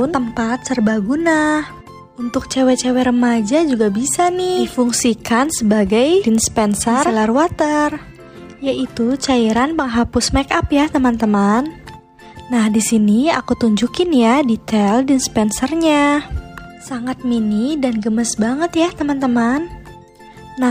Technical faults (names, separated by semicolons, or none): none